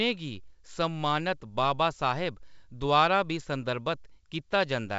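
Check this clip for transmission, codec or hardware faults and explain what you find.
No faults can be heard in this speech clip. The G.722 wideband telephone coding at 64 kbit/s is working normally, with nothing above 7.7 kHz and at most a faint trace of the coding itself.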